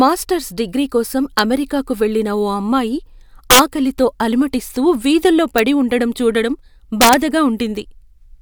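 Integer overflow shows up four times in this speech. At 1.39 s, right after "డిగ్రీ కోసం", there's a sharp crack, and another at 5.58 s. Both only just reach the limit. The worse bursts come at 3.51 to 3.59 s, after "అమెరికాకు వెళ్లిన ఓ అమ్మాయి", and 7.01 to 7.14 s, after "వీధుల్లో పడి ఉండడం చూడడం", where peaks run about 6 dB over. Instead of clamping, the sample values wrap to the opposite extreme, so you get violent snaps far harsher than ordinary clipping.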